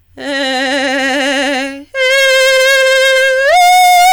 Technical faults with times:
0.00-4.12 hard clipping

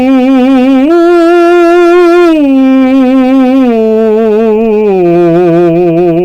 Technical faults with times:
0.00-6.24 hard clipping

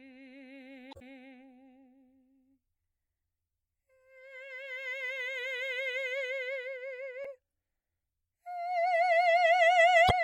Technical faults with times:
0.90-1.13 damaged data in a compressed stream
7.22-7.26 damaged data in a compressed stream
10.07-10.11 damaged data in a compressed stream

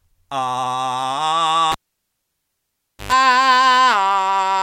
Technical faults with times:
1.72-3.12 cable pulled and plugged in

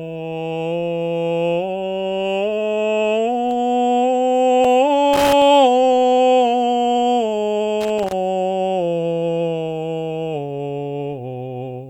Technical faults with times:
3.51 block of digital silence
4.64 block of digital silence
5.13-5.42 loose connector crackle
7.81-8.12 loose connector crackle

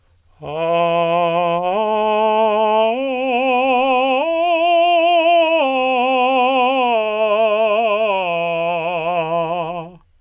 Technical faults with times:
none

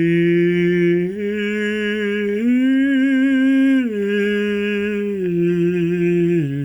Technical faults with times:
0.00-6.64 gain pumping

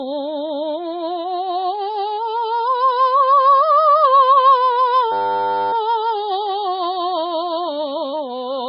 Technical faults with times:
0.00-8.69 MP3 compression
5.12-5.73 system hang loop

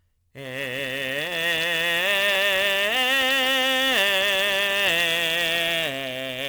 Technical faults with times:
0.00-6.49 sample clock jitter

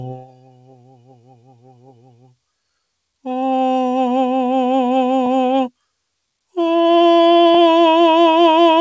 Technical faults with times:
0.00-8.81 noise suppressor applied to music or sounds
0.15-2.36 sound cut by the noise suppressor

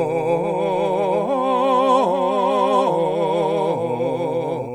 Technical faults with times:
0.00-4.74 doubled audio track

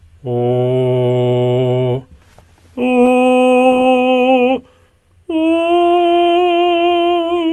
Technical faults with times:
none

